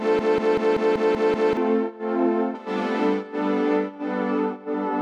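From the very start until 1.57 s, a broken-record loop: a 190 ms fragment repeats exactly, back to back, about seven times, likely because the stream stalled and resent its last buffer. Unlike stutter or echo, every repeat is identical and nothing new plays underneath.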